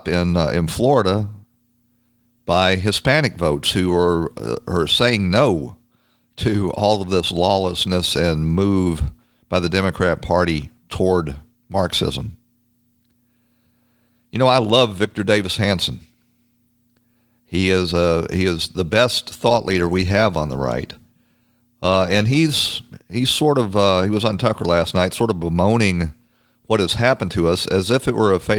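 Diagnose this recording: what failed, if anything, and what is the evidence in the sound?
Nothing in this recording stood out on listening as a failure at any stage.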